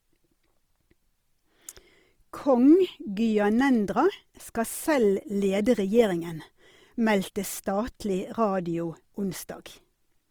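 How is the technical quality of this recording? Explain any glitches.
The technical quality is compromised throughout by one fault. For the whole speech clip, tones sound grainy, rough and noisy, likely Opus compression in its music mode, where sparse bits fill bands with folded or noise content, consistent with about 24 kbps.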